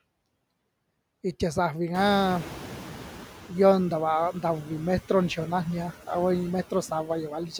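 All the way through, you can hear noise suppressor artifacts. The suppressor is pulling steady background noise down by about 14 dB, band by band, so the leftover noise dips between phrases and swells under the speech.

Around 2 s, the room noise jumps by about 19 dB, settling roughly 15 dB under the speech. The noise suppressor is caught catching up from 1.94 to 3.37 s: at first it only cuts about 6 dB, then the noise sinks over those 1.43 s, just before "iyo nta vaa".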